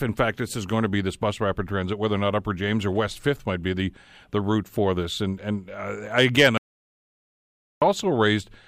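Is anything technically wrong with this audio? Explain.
Yes. Just after "and uh again", at 6.58 s, the speech breaks off and the track falls to total silence until 7.82 s, an audio dropout to silence lasting about 1.24 s. The input was likely lost, through a disconnected device, a failed link or a stray mute, while writing continued with silence. Unlike a natural pause, no room tone or noise floor remains, and the sound cuts off and resumes abruptly, with whatever was said in between lost.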